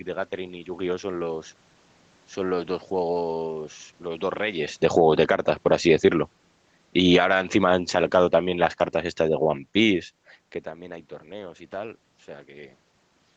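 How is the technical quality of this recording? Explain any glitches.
The recording has audible level instability from automatic gain control pumping between about 5.3 and 10 s. The speech and the room noise behind it swell and sink together. The audio is band-limited to 8 kHz, which fits an Opus call link at around 24 kbps. The level shifts near 4.5 s and 10.5 s sound like the talker moving relative to the microphone rather than processing.

Automatic gain rising, from 5.29 to 6.14 s (about +3 dB) and from 7.26 to 8.0 s (about +5 dB): the gain control judged the input too quiet and raised its gain over a fraction of a second. Because it scales everything it receives, the room noise comes up along with the voice. The second, larger rise follows straight after a cut, so the level seesaws rather than settling.

Automatic gain falling, from 6.84 to 7.35 s (about −8 dB) and from 7.92 to 10.04 s (about −3 dB): here the control decided the input was too loud and pulled its gain down. 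The first drop is steep and quick, so the voice and background dip noticeably within half a second. The later one is a slow sag lasting about two seconds, leaving the speech gradually receding.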